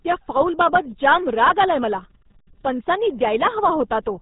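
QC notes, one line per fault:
Throughout: RealAudio 14.4 codec. The speech sounds muffled and gargly, with a watery, bubbling texture over every syllable and nothing audible above 3.8 kHz, so consonants like s and f lose their edge. This is the sound of RealAudio 1, a speech coder built to fit dial-up modems, squeezing the signal down to a bitrate consistent with 8 kbit/s. At that rate it discards the upper band entirely and coarsely models what remains, leaving heavy coding damage.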